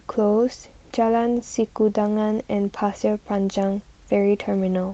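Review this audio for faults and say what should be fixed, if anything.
Nothing to fix; no faults found in the speech recording.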